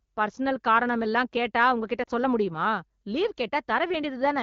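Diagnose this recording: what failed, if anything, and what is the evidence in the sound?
At 2.03 s the speech briefly fades toward near silence, then recovers by 2.10 s, between "காரணமெல்லாம் கேட்டா உங்க கிட்ட" and "சொல்ல முடியுமா லீவ்". This is lost AMR speech frames on the network's radio path. The gap is about 40 ms, consistent with two dropped 20 ms frames. The AMR-WB decoder, running clear at a rate that fits 12.65 kbit/s, covered the hole by repeating its last good pitch and vocal tract settings at reduced gain.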